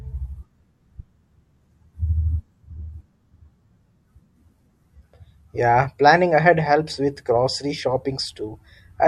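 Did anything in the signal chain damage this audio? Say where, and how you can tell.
No, nothing in this speech recording stood out on listening as damage from any stage of the chain.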